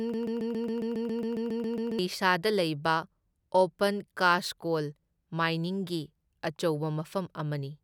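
A broken-record loop is already under way at the start and runs to 1.99 s: a 137 ms fragment of speech repeats back to back, likely from a stalled stream resending its last buffer.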